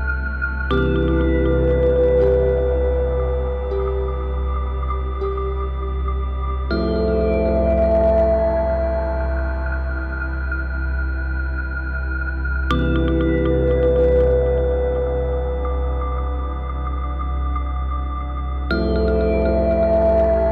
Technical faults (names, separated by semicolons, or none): hard clipping